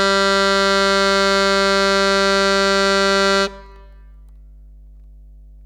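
From start to finish, a steady 50 Hz mains hum sits under the music, roughly 25 dB down. Power-line interference, likely from a ground loop or a nearby transformer, leaked into the signal.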